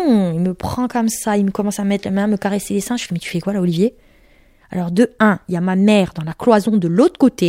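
A recording of speech, with no technical fault to be heard anywhere in it. There is nothing here to time or trace to a cause.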